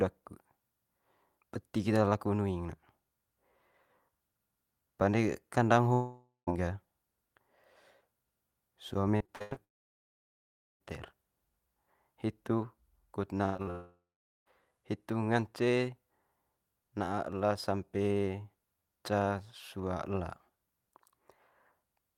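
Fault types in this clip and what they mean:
Long network dropout: The sound breaks off and the last fragment is drawn out into a fading buzz before going silent. This happens at 5.93 s (about 0.54 s lost, 160 ms of it silence), at 9.64 s (about 1.16 s, almost all silent) and at 13.70 s (about 0.76 s, 460 ms silent). Each time speech resumes further along with the lost stretch simply gone, likely because no packets reached the receiver for that whole interval.
Repeated packet loss (robotic sound): Speech turns choppy in short bursts. At 9.17–9.58 s there are five brief holes, the longest 88 ms, and about half the span is patched. Just after "hitu kut", at 13.38–13.68 s, four holes appear, the longest 98 ms, with just over half patched. The receiver keeps losing packets in quick succession and papers over each gap by extending the previous sound, which gives the broken texture.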